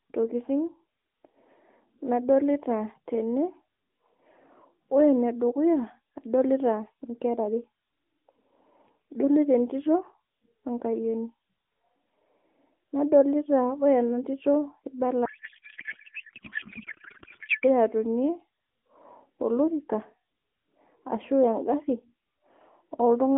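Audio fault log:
15.26–17.64 s, codec payload misread: for about 2.4 s the speech turns into garbled warble and noise that barely tracks it, which fits octet-aligned AMR frames unpacked as bandwidth-efficient. Unlike dropouts or a low-bitrate buzz, the sound keeps going but has lost its speech shape, then snaps back to the light-sounding AMR narrowband line.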